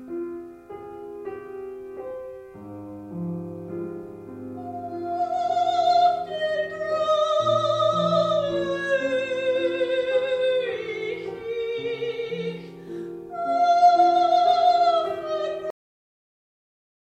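The final stretch of the recording was never written or played out, a cut-off end in which the last buffers of the audio never made it through. At 15.70 s the sound stops mid-event rather than finishing or fading naturally, dropping straight to digital silence with no decay tail at all. That dead silence then runs for the remaining 1.4 s, so the ending sounds chopped off rather than concluded.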